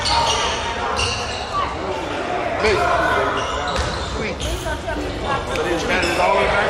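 No technical faults can be heard anywhere in this clip.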